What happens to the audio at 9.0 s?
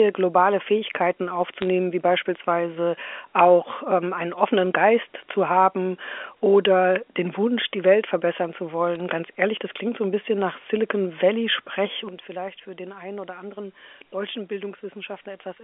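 At about 8.95 to 9.01 s there is a brief burst of bit errors on a digital phone line, with roughly one bit in a thousand flipped across a short stretch. On this G.711 A-law line, each wrong bit corrupts a single logarithmic sample, and hits on the sign or upper bits throw it far off, producing sharp isolated ticks and crackle laid over speech that otherwise continues unchanged. Packet loss would instead leave gaps or smeared concealment.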